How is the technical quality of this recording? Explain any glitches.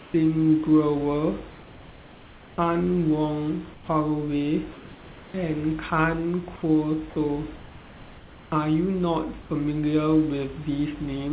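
The recording carries telephone-band speech over a call path that cuts everything above 4 kHz, and the room noise sits about 24 dB below the speech. One glitch stands out.

From 3.74 to 3.88 s, for about 140 ms, comfort noise replaces the background. The real room noise, about 21 dB below the loud passages, gives way to a smooth, featureless hiss about 5 dB quieter. The likely cause is discontinuous transmission. The sender's voice detector judged the moment silent and stopped sending, and the receiver filled the pause with synthetic noise shaped to match the background. This differs from a dropout or a noise gate because the pause never goes fully silent. The background's detail flattens into steady noise, then returns when sending resumes.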